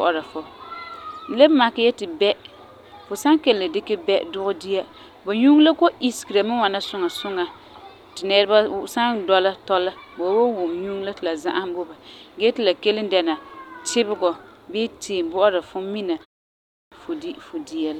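At 16.5 s the speech comes back after a pause of about 0.33 s, and its opening is missing. This is a clipped start after a pause. The output device seems to drop into a sleep state during the short silence and then needs time to wake and lock again. Until about 16.92 s, roughly 417 ms of speech is lost. The next word bursts in abruptly, with its first sounds cut away.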